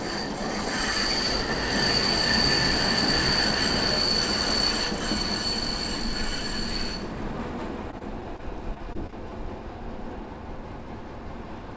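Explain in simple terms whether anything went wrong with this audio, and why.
Something did go wrong, briefly: there's repeated packet loss (robotic sound) from about 7.91 to 9.15 s. In that stretch, nine small chunks of audio went missing over the call connection, none longer than about 21 ms. Each time, the receiver filled the hole by stretching out the last bit of sound, which is why it turns choppy there. The call path itself, which carries nothing above 8 kHz, isn't the problem.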